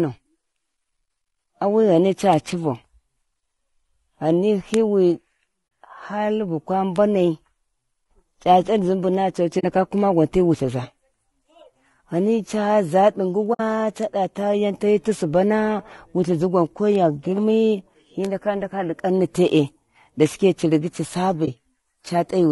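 Throughout the speech the voice sounds rough and grainy, with noise filling the gaps between harmonics and a thin, artificial top end. This is likely low-delay AAC compression (AAC-ELD) at 32 kbps, whose short frames cannot resolve pitch harmonics cleanly at that rate.

Sharp, isolated ticks land at 2.33, 4.74 and 6.96 s, then at 16.95 s between "wulthizi gwan ko" and "girmi hi", and at 18.25 s. Each is a bit error spike: a single flipped bit throws one sample, or at 4.74 s a few adjacent samples, far off before snapping back. The result is a broadband click unrelated to the voice.

Soft-edged dropouts fade the voice out and back in at 5.67 to 5.71 s, at 9.59 to 9.64 s just after "a to ci", at 13.53 to 13.61 s, and at 21.45 to 21.49 s after "shike ci rigi ci". These are AAC frame loss with muting. The decoder zeroed each missing stretch of about 20 to 60 ms, and the overlapping windows turn each gap into a smooth hole, or a brief dip for the single lost frame at 21.45 s.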